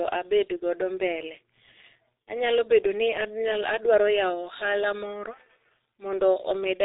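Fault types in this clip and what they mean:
G.723.1 codec: The speech passes through a low-rate telephony coder and is heavily damaged. Nothing reaches above 3.8 kHz, so it sounds muffled. Its voice model updates slowly across long frames, leaving a hoarse tone and smeared consonants. The thinness fits a bitrate near 6 kbit/s.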